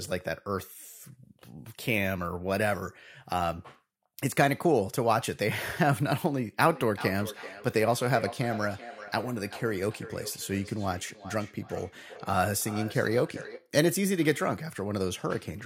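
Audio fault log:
6.67–13.73 s, feedback echo between two devices: a second device in the same room is on the call and plays back what this microphone sent, and the microphone picks that playback up again. The echo canceller here only removes its own device's output, so the returning sound gets through. The speech comes round again about every 0.4 s, each pass thinner and more ringing, and the loudest repeats sit about 14 dB below the direct speech.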